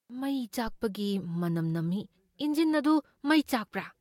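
At 0.67 s a phantom power thump hits the speech: a supply switching on or off on the live input sends a voltage step through the coupling capacitors, giving a deep thud that dies away within about 25 ms and is gone by 0.78 s. The waveform shows a large one-sided lurch with a quick tail, and the spectrogram shows a dark low-frequency blotch.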